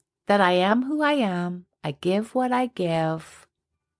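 Nothing goes wrong anywhere in this bit of speech, so there's no technical fault to point out.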